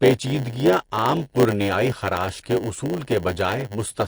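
From start to finish the speech carries a swirly, watery coating. The quieter detail seems to flicker in and out, so sibilants come out with a metallic chirp and consonant onsets sound smeared. That's the signature of lossy coding, likely MP3 compression starved for bits. The damage is plainly audible, which fits a low bitrate somewhere around 48 kbps.

Layered over the whole clip is a steady 100 Hz buzz, and the speech drags at 0.919 times normal speed. That's a block size mismatch (padded). One stage is handing over shorter blocks than the next stage expects, and the leftover space gets filled with silence. So a tiny gap lands in every block, a hundred times a second, which gives you the buzz and stretches the timing.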